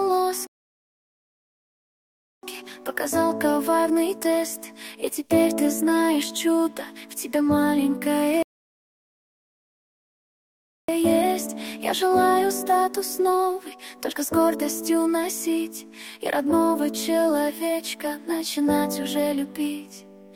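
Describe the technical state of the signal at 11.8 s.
At 11.8 s the signal is intact, with no dropout, distortion, or other fault audible at that point.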